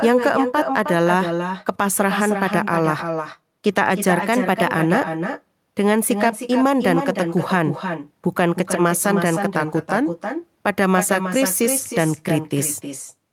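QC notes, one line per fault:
Throughout, echo with no canceller: Each phrase returns around a third of a second later as a quieter, thinner copy, about 6 dB below the direct sound. The far end's loudspeaker feeds its microphone, and nothing removes that path.
4.18–4.74 s and 9.55–10.09 s, drift correction step: The first span runs 5.8% fast, about a semitone sharp. The second runs 5.8% slow, about a semitone flat. Clock-matching software likely jumped its playback rate to refill or drain a buffer.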